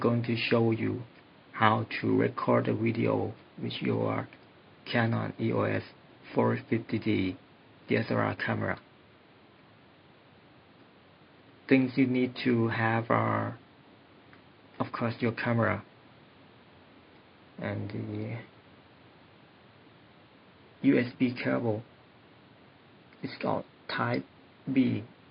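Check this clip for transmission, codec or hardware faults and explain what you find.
No transmission, codec or hardware faults can be heard in this clip. Nothing in the audio calls for further explanation.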